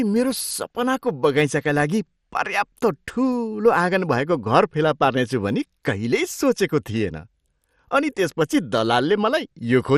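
A speech recording with MP2 compression damage running through the whole clip: the sound is dull and carries a gurgling, granular roughness, which fits a low rate of about 64 kbps. The likely cause is MPEG Layer II coding starved of bits, so upper sub-bands drop out and the remaining ones are coarsely quantised. On a spectrogram, energy stops at 15 kHz, with blocky high bands flickering on and off.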